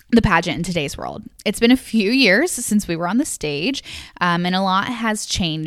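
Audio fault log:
No audible faults detected.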